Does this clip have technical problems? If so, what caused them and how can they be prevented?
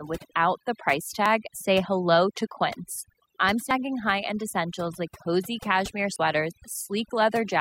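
Yes. Throughout, the pauses fall to near silence with twinkling specks. This is overdone noise removal: a noise reducer set too aggressively pushes down every frequency band close to its noise estimate, taking quieter parts of the speech with it. Use gentler reduction settings and record in a quieter space.

At 1.26 s, 3.71 s and 6.16 s the sound skips abruptly, losing roughly 50 ms each time, at a regular spacing of about 2.5 s. The likely cause is audio missing between chunks: the recording chain drops a sliver while closing one block and starting the next, then splices the edges together with no gap. Make sure the recorder or processor hands off blocks continuously, with overlap or buffering, so nothing is lost at the joins.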